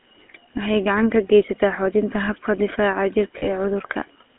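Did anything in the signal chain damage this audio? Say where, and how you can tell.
Yes. The codec stage applied the GSM full-rate codec throughout, which fits a 13 kbps coder: buzzy, gravelly sound, with the spectrogram confined between 250 Hz and 3.6 kHz.

Lost GSM frames in the network or codec path cause a rough metallic ring from 3.38 to 3.48 s, which fits two lost 20 ms frames.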